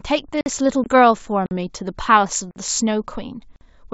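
Gap between chunks at 0.41 s, then again at 2.51 s and 3.56 s: the audio arrives in pieces that sound about one second long, and each join leaves a 50 ms hole of silence with hard edges. Nothing is missing. The sound simply stops and resumes at each join.

Packet loss on an ADPCM call at 0.84 s: about 20 ms of sound, roughly a single packet, drops to silence. The decoder's adaptive predictor and step size then lose step with the sender's, so the sound comes back with brief distortion before settling over the wideband G.722 coding, whose clarity fits a 64 kbit/s stream.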